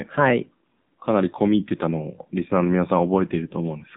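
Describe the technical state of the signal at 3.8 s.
At 3.8 s the speech still carries AMR narrowband mobile codec damage, present across the whole clip. Nothing above 3.8 kHz survives, so the top end is gone. The codec models the vocal tract and drives it with a few pulses per short subframe. At this low bit budget, the damage is plainly audible. The voice sounds buzzy and synthetic, which fits a 7.4 kbps AMR-NB mode.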